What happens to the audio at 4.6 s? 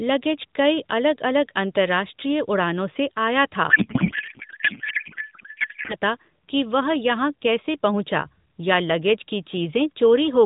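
A codec payload misread runs from 3.70 to 5.95 s. Octet-aligned AMR frames are unpacked as bandwidth-efficient, so fields land wrongly. Speech becomes garbled warbling noise.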